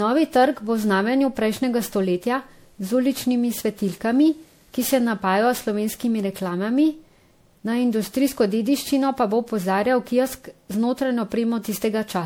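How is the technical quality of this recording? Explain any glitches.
The speech is degraded by generation loss that runs through the whole recording. Its swirling, hollow character is stronger than one lossy encode would leave. The detail that tells it apart is the blurring of attacks and consonants, not just a lowered ceiling. The bandwidth still reaches 21 kHz, with nothing above. The sound points to MP3 at around 96 kbit/s, likely re-encoded about seven times. Each pass requantises on a shifted frame grid, stacking noise and spectral holes.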